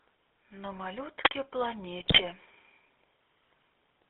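Speech through a GSM full-rate codec carries a steady buzzy, gravelly roughness and a band of 300 Hz to 3.6 kHz, which fits 13 kbps coding. Unlike generic narrowband filtering, the voice itself sounds rasped. From 2.0 to 2.21 s, GSM bit errors turn it into squawks and gargling pops, fitting about ten corrupted frames. Packet loss would leave gaps or smeared repeats instead.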